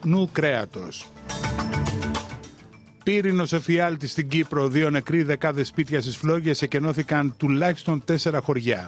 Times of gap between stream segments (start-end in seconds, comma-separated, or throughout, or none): none